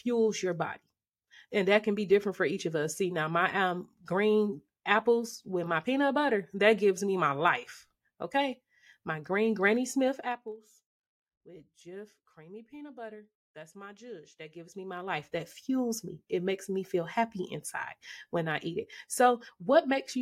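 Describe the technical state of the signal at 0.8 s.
At 0.8 s the speech signal is intact, with no audible technical fault at that moment.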